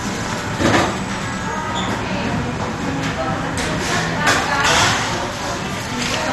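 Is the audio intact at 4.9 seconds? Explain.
No. At 4.9 s the sound carries MP2 compression damage, present throughout the clip rather than at that moment alone. The likely cause is MPEG Layer II coding at a low bitrate, around 64 kbps: with too few bits to share among its 32 sub-bands, the upper bands are dropped entirely, leaving nothing above 12.2 kHz, while the bands that remain are coarsely quantised. The result is plainly audible as a dulled top end with a gurgling, granular texture.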